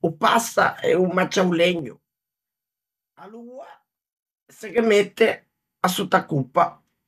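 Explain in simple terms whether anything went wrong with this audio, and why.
Zipper noise appears twice in this speech: from 1.71 to 2.13 s as the level drops sharply, and from 4.52 to 4.86 s as it climbs back. The volume moves in coarse jumps, about ten a second, each leaving a tiny click, unlike a smooth fade, which glides silently.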